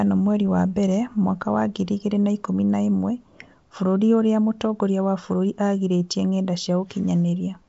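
No faults present: the speech runs over a G.722 wideband link with light coding texture consistent with 56 kbit/s and nothing above 7.7 kHz.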